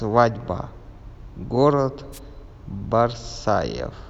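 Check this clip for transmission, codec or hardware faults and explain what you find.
There's one fault here: a wireless microphone noise hit at 2.12 to 2.19 s, lasting about 70 ms. The radio link from an analogue FM mic dips for a moment when reflected signals cancel the direct one at the receiver. As the signal drops, the receiver's own noise climbs. You hear it as a quick swish of static.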